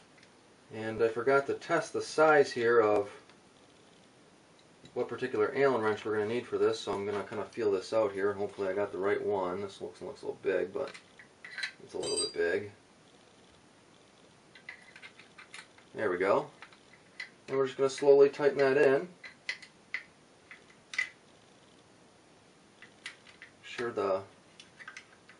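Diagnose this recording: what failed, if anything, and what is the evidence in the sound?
Nothing failed; no fault is audible anywhere in the recording.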